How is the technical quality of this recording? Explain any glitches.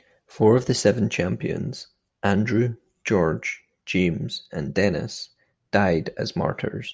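Nothing technical gets in the way here; I hear no glitches anywhere in the recording.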